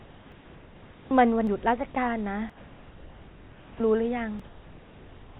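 The speech in this clip opens on a steady, featureless hiss running from 0.00 to 1.11 s. It sits about 2 dB below the level of the real room background that follows, and it lacks that background's texture and variation. This is comfort noise in place of the background. The likely cause is discontinuous transmission: the sender went quiet during the pause, and the receiver filled the gap with synthetic noise matched only roughly to the spectrum of the room. Where that stretch ends, the first sound arrives abruptly, with its soft beginning missing. This is an onset clipped by the voice detector. Roughly the first 30 ms, from 1.08 to 1.11 s, are absent, most likely because the detector was late to register that sound had resumed, so comfort noise covered the start. The clip also has four sudden jumps in the sound, at 0.32, 1.47, 2.50 and 4.40 s. Each one loses a short piece of audio with no silence in the gap: about 20 ms at 0.32 s, about 70 ms at both 1.47 and 2.50 s, and about 40 ms at 4.40 s. 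These are dropped buffers (overrun), likely from the program failing to collect its samples before the hardware overwrote them, so the audio on either side is spliced straight together. Through all of this, the call path's G.711 mu-law coding limits the band to nothing above 4 kHz, and room noise sits about 28 dB below the speech.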